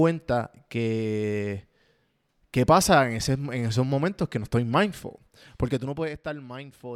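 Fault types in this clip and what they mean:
zipper noise: A roughly 10 dB gain drop, applied in unsmoothed 1 dB steps about 30 times a second, ticks audibly after "que no estoy mindful", 5.64 to 6.16 s.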